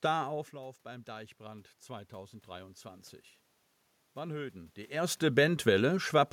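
Automatic gain rising, 0.53 to 3.13 s: when the talker moves away at about half a second, the speech drops by about 14 dB, and the gain control slowly adds about 5 dB back, so voice and room noise swell together over 2.6 s.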